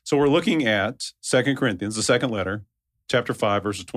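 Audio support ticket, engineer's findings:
No faults found on listening.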